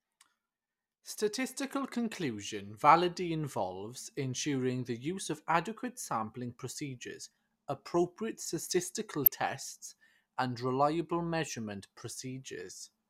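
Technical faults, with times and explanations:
1.82 s, DAB burbling: a brief burst of burbling just before "conclusion validity involves ensuring", as bit errors at a rate of roughly 0.15 percent slip past error correction into the MP2 data, so that corrupted audio data disturbs individual sub-bands over a few frames.
9.25 to 9.34 s, DAB burbling: a longer burst of burbling after "sampling procedures appropriate statistical". A slightly higher error rate, around 0.2 percent, disturbs sub-bands across six frames.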